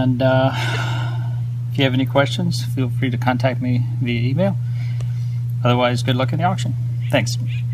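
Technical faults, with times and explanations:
0.74 to 0.76 s and 7.33 s, corrupt frame decoded: each time a few compressed frames had flipped bits, but the decoder played them anyway. Misread codes or gains pushed energy into the wrong frequencies for roughly a frame's length, giving a brief blip. The first is the stronger one.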